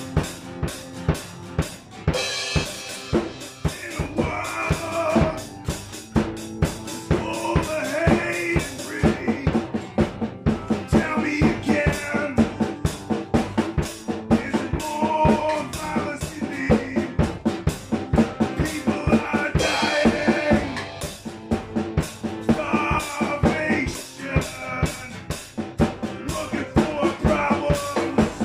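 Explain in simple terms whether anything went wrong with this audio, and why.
From 0.83 s to 10.77 s there is a regular tick about every 2 seconds (1.99 s apart), roughly seven times, and after that the sound runs smoothly. These are periodic USB or driver dropouts. Something running in the background kept interrupting the audio connection on a fixed schedule, and each time about a hundredth of a second of sound was skipped. The sound jumps across that tiny gap, and the jump is heard as a tick.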